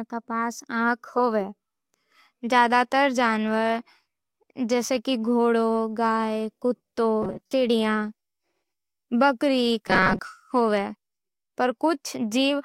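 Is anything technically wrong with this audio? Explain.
Yes. Robotic sound from repeated short buffers occurs at 7.22 to 7.53 s and 9.88 to 10.19 s. Audio likely arrived too seldom, so a fragment of about 5.3 ms was looped through most of each stretch, stamping a rigid 188 Hz metallic buzz onto the speech.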